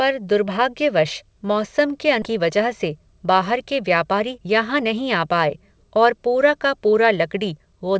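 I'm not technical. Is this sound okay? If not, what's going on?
No. At about 2.22 s there is a skip ahead. The call system threw away roughly a second of speech, so playback jumps straight forward and that second of talking is simply missing, joined with almost no gap.

From 2.32 s to 7.96 s there is a jitter buffer speed-up. Audio had piled up waiting, so the system snipped out tiny slices, about half a second in total, to catch up. The speech runs about 9% faster at normal pitch and sounds hurried.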